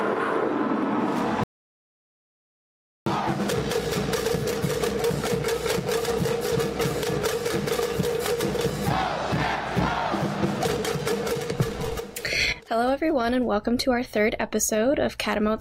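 At 1.43 s the sound cuts off abruptly and does not return until 3.06 s, an audio dropout to silence lasting about 1.63 s. The gap is silent, with no room tone or noise floor underneath, so it is not a natural pause or a noise gate closing, which would leave faint background or fade in and out. The likely cause is a brief loss of input while recording continued, and whatever occurred during the gap is gone.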